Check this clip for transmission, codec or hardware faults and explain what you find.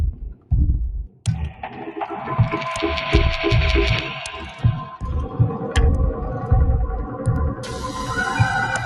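Three faults turn up: a speech noise suppressor left running on non-speech sound, five passages it pushes down hard, and one click from dropped samples.

The noise suppressor applied to music or sounds is active for the whole clip. Built to keep a voice and discard the rest, it treats steady tones, ambience and decay as noise, so gain swings by roughly 10 dB as held material is pulled down and attacks pass. The result pumps and thins. On a spectrogram, sustained bands fade soon after each onset, and the waveform envelope breathes unevenly.

Sound cut by the noise suppressor occurs at 0.12–0.52 s, 1.04–1.26 s, 1.5–1.78 s, 4.84–4.99 s and 7.55–8.04 s. In each stretch the processor decided the sustained or fading content was noise and attenuated it beyond its usual swing: by about 15 dB in the first two, about 10 dB in the next two, and about 8 dB in the last. Tails are cut short and the sound sinks abruptly. 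A spectrogram shows those regions darkened across the band, and the waveform shows a clear notch in amplitude.

Dropped samples occur at 7.36 s. The sound is a single sharp click where the waveform jumps straight from one value to a later one. The missing stretch is a fraction of a millisecond, far too short to remove anything audible, so only the discontinuity is heard. The likely cause is a few samples lost in the stream. On a spectrogram it appears as a thin vertical line spanning all frequencies, and the waveform shows a sudden step.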